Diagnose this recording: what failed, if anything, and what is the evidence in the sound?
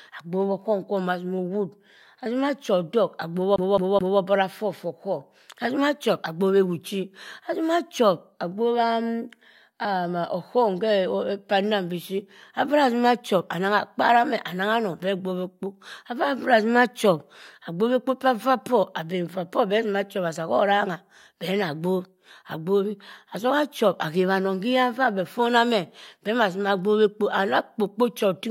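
CD stuck on one turn, from 3.56 to 4.20 s, at the playback stage: a roughly 0.21 s fragment of the speech repeats three times, each pass cut off by a brief mute as the read position jumps back, before the audio moves on into "obara foh for". The even, rapid stutter points to a scratch or defect on the disc throwing the laser back one track at the same point on every rotation, so the same short stretch is read again and again.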